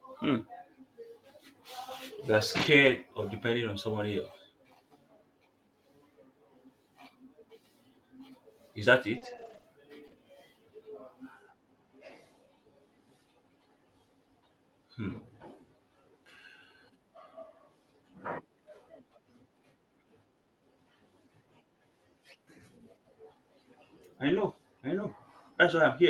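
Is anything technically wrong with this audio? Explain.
Yes, there are two kinds of packet-loss faults in this speech clip, which passed through an Opus call path whose audio is cut off around 12 kHz.

Lost packets rebuilt from error correction occur at 2.57–2.91 s, just before "of depending on somebody", and again at 24.27–24.45 s. Packets went missing, but each following packet carried a low-bitrate backup copy, and the decoder played those copies instead of leaving a hole. About 180 ms and 100 ms of audio were rebuilt this way. Those stretches sound rougher and noisier than the surrounding speech, but there is no silence.

Repeated packet loss, heard as a robotic sound, runs from 9.17 to 10.15 s. Five separate gaps fall in this second, the longest 40 ms. The decoder patched 120 ms by stretching the preceding sound forward, about 12 percent of the span, while another 120 ms is simply missing. 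Because each patch comes soon after the last, the result is choppy, with small pieces of speech dropped out.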